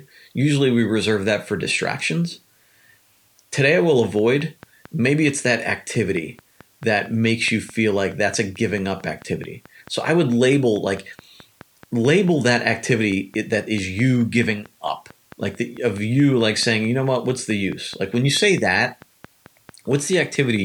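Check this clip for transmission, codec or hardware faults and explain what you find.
Two faults are present in this speech clip: a dithered low-bit-depth hiss across the whole recording and a regular click train over most of it.

Low bit depth with dither runs from start to finish. The audio has been reduced to about 10 bits, with dither added before rounding so that the quantisation error is spread into random noise and not locked to the signal. The result is a steady, even hiss roughly 40 dB below the speech, present under the talking and in the gaps, with no distortion.

A train of clicks begins at 4.19 s and continues to 20.57 s. Sharp pulses of much the same shape arrive at a regular 4.58 per second, about seventy in all, and their peaks reach roughly the level of the speech itself. The even spacing points to a periodic source, likely electrical interference from nearby equipment or a faulty connection or power supply. 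It is heard as steady ticking over the speech and through the pauses.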